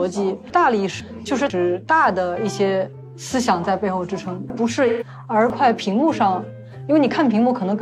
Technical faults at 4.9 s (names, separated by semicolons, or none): chunks out of order; AAC frame loss with concealment